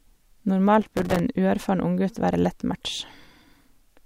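Speech, with a burst of processor overload crackle from 0.82 to 1.19 s, a gritty tearing that rides on the sound for those 0.38 s and then stops. The processor missed its buffer deadlines many times in a row, each miss dropping a few milliseconds to silence with hard edges, which fits buffers of about 3 ms. On a waveform the span looks chopped into many short flat gaps, while a spectrogram shows dense vertical broadband streaks across it.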